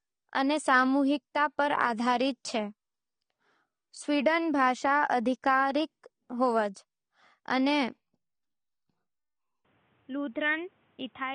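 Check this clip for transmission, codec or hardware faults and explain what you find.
Two faults are audible: codec damage across the whole clip, and a drop in quality near the end.

AAC compression: From start to finish the speech sounds dull and smeared, with a fizzy, warbling edge on sibilants and nothing above 9.7 kHz. This likely comes from AAC-LC coding at a low rate, around 32 kbps, where the encoder lowers its cut-off and thins out the upper bands.

Input switched to a poorer device: At 9.65 s the sound turns boxy and narrow, with nothing above 3.8 kHz, a level about 5 dB lower and a faint new background noise well below the speech. It stays that way to the end, with no gap at the change. The likely cause is the recording input moving to a lower-grade microphone or a headset's call profile.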